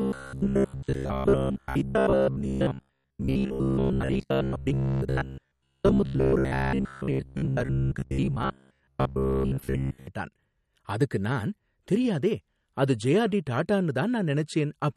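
Speech from 0.02 to 10.07 s, where software was likely starved of new audio and kept repeating short buffers of about 15 ms, so most of the sound is replaced by a rigid, metallic, robotic buzz at 66.7 Hz that follows the original only roughly. Throughout, the clip likely went through MP3 compression at a low bitrate, consistent with about 48 kbps, which plainly audibly smears and swirls the speech and leaves nothing above 12.6 kHz.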